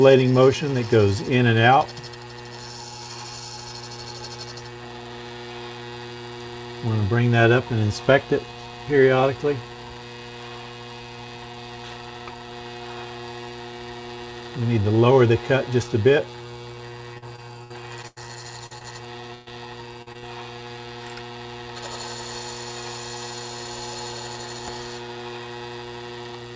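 From 17.14 to 18.18 s the sound turns choppy and robotic, with pieces missing. This is repeated packet loss: six gaps, the longest 92 ms, each patched by extending the preceding audio. Close behind come brief smears or wobbles at 18.66 s (40 ms) and 18.78 s (20 ms), short concealed packet loss where the receiver filled each small hole by continuing the last sound before blending back. From 19.34 to 19.48 s a held buzz or fading hiss replaces about 120 ms of audio, which resumes further on. This is a burst of packet loss, concealed by stretching the last sound while turning it down. Three more short concealed losses then smear the sound at 20.02 s (40 ms), 20.12 s (20 ms) and 20.18 s (40 ms). Throughout, the call path cuts everything above 8 kHz, which fits a wideband codec such as G.722 at 64 kbps.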